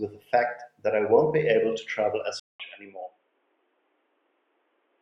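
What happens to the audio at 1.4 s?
Nothing goes wrong at 1.4 s; the speech runs on intact through that moment, with no dropout, click or distortion.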